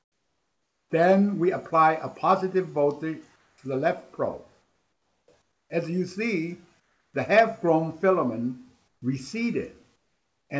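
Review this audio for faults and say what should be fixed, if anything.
Comfort noise in place of the background at 0.0–0.9, 3.36–3.58, 4.62–5.28, 5.42–5.70, 6.80–7.14, 8.88–9.02 and 9.96–10.50 s: the real background gives way to flat, featureless noise about 3 to 10 dB quieter. The likely cause is discontinuous transmission, where the sender stops during pauses and the receiver synthesises filler noise. To prevent it, disable DTX on the sending side, or tune its activity threshold so quiet background is still transmitted.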